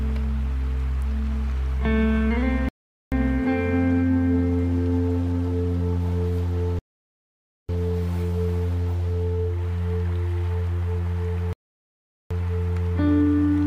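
The sound drops to silence three times: 2.69 to 3.12 s, 6.79 to 7.69 s, and 11.53 to 12.31 s. Each gap is clean and abrupt. These are likely Bluetooth stalls. Delayed packets emptied the headphones' buffer, and playback paused until data arrived.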